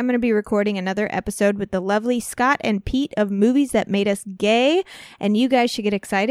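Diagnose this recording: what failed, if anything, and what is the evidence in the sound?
Listening through the speech recording, nothing stood out as a failure at any stage of the chain.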